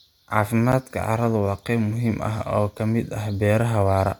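A gap between stream segments at 0.72 s breaks the speech with a brief hole of about 9 ms. Two consecutive segments of the stream, which appear to be cut at 1.0 s boundaries, carry timestamps that do not quite meet, so the player pads the missing span with silence. The hole has abrupt edges, heard as a tiny dropout or click in the speech, yet nothing is actually lost; the audio simply resumes slightly late.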